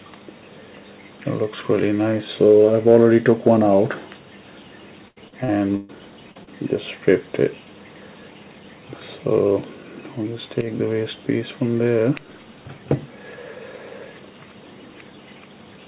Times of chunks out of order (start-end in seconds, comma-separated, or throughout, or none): none